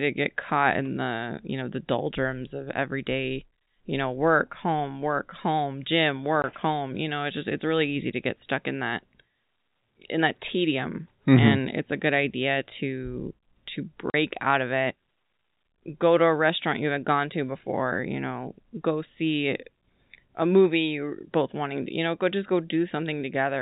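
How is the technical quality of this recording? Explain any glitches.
The recording has two brief dropouts over a narrowband telephone-quality signal capped near 4 kHz, typical of G.711 coding. The dropouts are packet loss filled with silence, at 6.42–6.44 s (20 ms) and 14.10–14.14 s (40 ms). Missing packets were replaced by silence, which fits one and two 20 ms packets. Each gap has hard edges. On a waveform it is a flat line, and on a spectrogram a clean vertical blank stripe.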